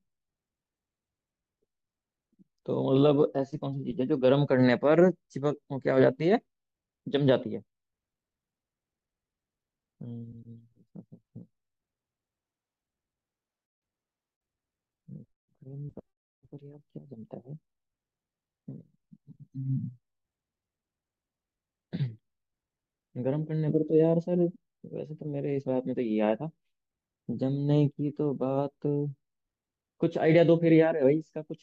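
No technical faults can be heard anywhere in this speech recording. There is nothing to place on the timeline.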